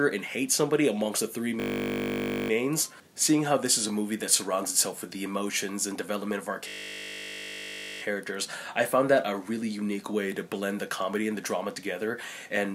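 A system hang loop strikes from 1.6 to 2.5 s and again from 6.68 to 8.02 s. The playback stalled while the hardware kept replaying a 20 ms slice of its buffer, so each stretch becomes a steady 50 Hz buzz.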